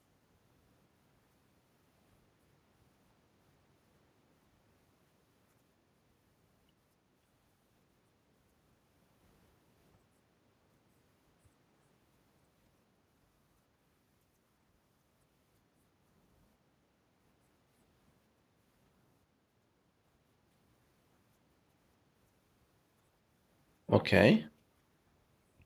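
No technical faults detected.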